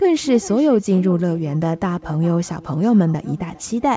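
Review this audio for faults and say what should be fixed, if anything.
Echo with no canceller runs through the whole clip. Each phrase of speech is followed, around 400 ms later, by a thinner copy about 19 dB below the direct voice. The far end is playing the call over a loudspeaker, its microphone picks that playback back up, and nothing subtracts it before it returns across the network. The call microphone path, band-limited to 8 kHz, is not the problem. Enable acoustic echo cancellation at the far end, or have that participant use a headset.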